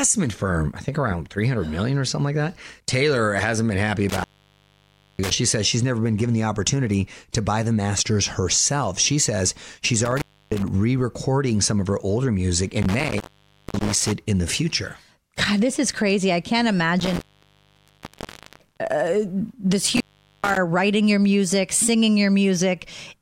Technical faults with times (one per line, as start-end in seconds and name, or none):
4.09-5.33 intermittent contact
10.05-10.68 intermittent contact
12.82-14.12 intermittent contact
17.00-18.80 intermittent contact
19.86-20.57 intermittent contact